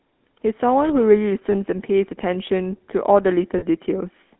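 Throughout, the speech has the buzzy, gravelly roughness of the GSM full-rate codec, consistent with 13 kbps coding. The codec models the vocal tract and drives it with sparse, regularly spaced pulses. On a spectrogram, energy is confined to roughly 250 Hz to 3.5 kHz, with coarse, smeared harmonics.

At 1.52 to 1.58 s and again at 3.58 to 3.64 s, lost GSM frames are concealed by repeating the last good frame's settings, which produces a brief rough, metallic ring. The durations fit one and then two lost 20 ms frames. The waveform shows a short, repetitive stretch where the normal speech detail stops.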